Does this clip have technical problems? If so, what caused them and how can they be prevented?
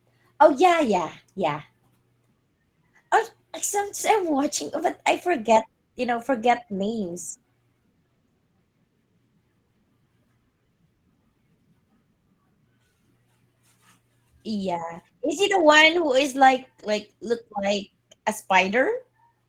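No, there are no technical problems to point to in this recording. There is nothing here whose cause needs tracing or that needs preventing.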